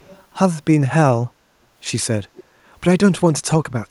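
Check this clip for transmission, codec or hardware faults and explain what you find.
An echo leak appears twice in this speech clip, from 0.00 to 0.23 s and from 2.35 to 2.44 s. The far end's echo canceller likely left residue, returning faint copies delayed 392 ms, around 30 and 25 dB below the speech.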